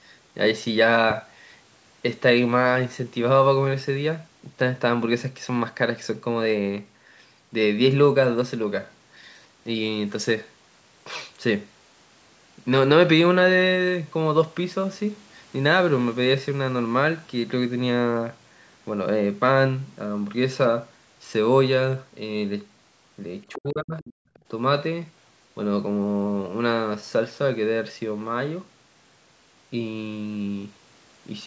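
At 1.10 to 1.13 s a single sharp pop cuts in, peaking a few decibels above the speech, which carries on beneath it. This loud pop is likely a brief voltage pulse from a plug, switch or static discharge entering the signal chain.

From 23.54 to 24.03 s the talker's speech sinks and breaks up, dipping by something like 35 dB in places over roughly 0.4 s in total. This is likely speech suppressed in double talk: with both sides talking at once, the echo canceller could not separate the talker from the loudspeaker echo and turned everything down.

Overlapping this, from 23.98 to 24.13 s, a faint second voice can be heard, roughly 25 dB below the speech. At 24.34 to 24.39 s an even quieter scrap returns, around 35 dB down. This is the other side's voice leaking through, likely loudspeaker output that the canceller failed to remove fully from the microphone.

Between those two leaks, from 24.24 to 24.34 s, the room background drops out by about 19 dB for about a tenth of a second and then returns. 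This is background gated by the echo canceller, which clamped the microphone hard while the loudspeaker was active.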